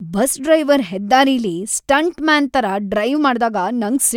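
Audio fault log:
No fault is heard in this speech.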